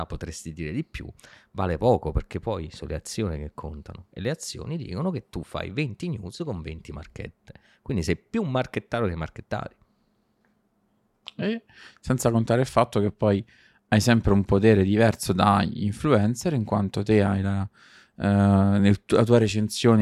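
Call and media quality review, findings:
No technical faults found in the speech signal; level, continuity and timing hold steady throughout, with nothing requiring action on the call or media path.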